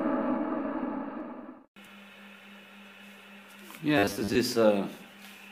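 From 3.98 to 4.35 s the sound turns robotic. A rigid, metallic buzz at 100 Hz sets in, following the original only roughly. This is robotic sound from repeated short buffers, the likely cause being audio arriving too seldom. To fill the gaps, the playback repeats the last stretch it holds, about 10 ms each time, which sets the buzz rate. Around half of the audio in this span is repeated, and the real material underneath is skipped.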